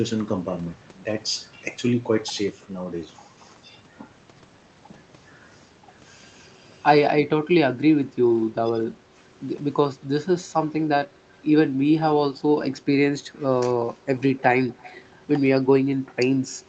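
Speech carried over a call path whose spectrogram energy stops near 8 kHz. Between 8.65 and 8.87 s the voice is dipped by about 10 dB over roughly a tenth of a second in total. This is speech suppressed in double talk, likely from an echo canceller muting the talker while the far end spoke. The waveform shows a brief notch in the envelope. At 13.40–13.44 s and 14.69–15.00 s a faint copy of the voice returns about 220 ms late, at about 30 dB and about 25 dB below the speech. This is echo leak, likely from imperfect cancellation at a loudspeaker end. It appears as faint, time-shifted harmonics on the spectrogram.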